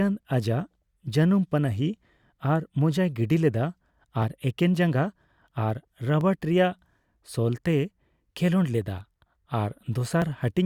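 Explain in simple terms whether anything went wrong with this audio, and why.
Periodic USB or driver dropouts occur in this speech from 0.23 s to 10.22 s. Every 2.0 seconds, about a millisecond of sound is skipped when something briefly blocks the audio connection. The skips sound like ticks while someone is talking, about seven in all.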